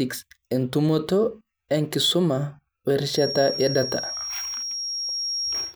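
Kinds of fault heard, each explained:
Feedback whistle: a thin, steady tone near 5.6 kHz enters at 3.07 s and runs to the end, sitting only a little below the speech level and swelling and fading slowly in level. Its likely cause is a loudspeaker-to-microphone loop held just short of runaway feedback, sustaining that single frequency.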